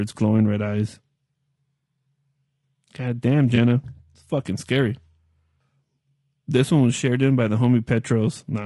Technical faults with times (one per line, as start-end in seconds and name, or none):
0.00-8.66 low-delay AAC compression
3.55-3.58 AAC frame loss with concealment